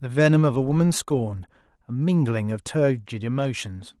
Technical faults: none

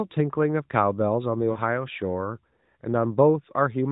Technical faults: lost AMR speech frames

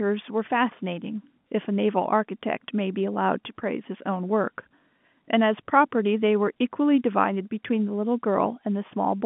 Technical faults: none

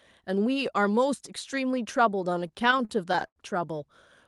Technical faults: repeated stalls (stutter)

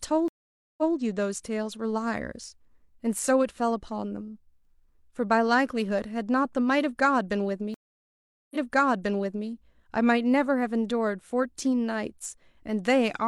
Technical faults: stream reconnect

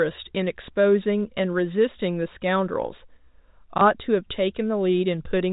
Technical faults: packet loss with last packet repeated

